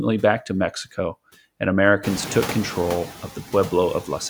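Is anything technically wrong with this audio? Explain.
Yes. Noise suppressor artifacts run throughout: the processor pulls noise-dominated bands down about 12 dB between words, letting noise swell back under speech, unlike a gate's full shutoff. The room noise, rising about 22 dB around two seconds, is part of the recording, not a fault.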